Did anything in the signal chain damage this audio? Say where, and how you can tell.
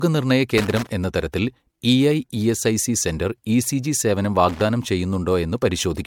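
Yes. Throughout, the speech sounds swirly, smeared and hollow, with blurred attacks and nothing above 19.7 kHz. This is likely generation loss from repeated MP3 re-encoding, about four passes, each adding fresh quantisation noise.

Loose connector crackle appears in the analogue wiring, as irregular scratchy bursts from 0.58 to 0.89 s and from 4.49 to 4.62 s, where a worn contact chops the signal.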